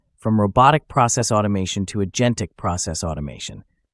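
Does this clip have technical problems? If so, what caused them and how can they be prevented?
No, the signal has no technical problems to trace to a cause or prevent.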